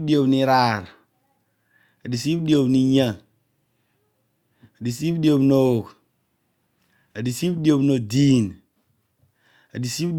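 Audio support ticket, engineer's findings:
No audible faults found in this speech recording.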